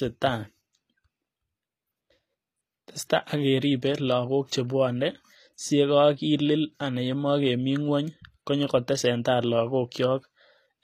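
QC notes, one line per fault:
Throughout, HE-AAC compression: the speech has a bright but synthetic-sounding top, with s sounds that come out gritty, metallic and lispy, and nothing at all above about 14.9 kHz. This plainly audible damage is likely from HE-AAC coding at a low rate, which fits something near 24 kbps. Only the lower spectrum is coded, and the treble is rebuilt by copying lower bands upward under a coarse envelope, so the harmonics fail to line up across the crossover.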